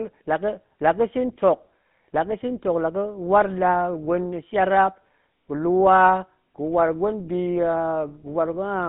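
Throughout, the speech has passed through the GSM full-rate codec, which rebuilds the voice from a vocal-tract model and a coarse pulse excitation, consistent with a 13 kbps stream. The result sounds plainly buzzy and gravelly, confined to roughly 150 Hz to 3.6 kHz, with nothing above 3.8 kHz.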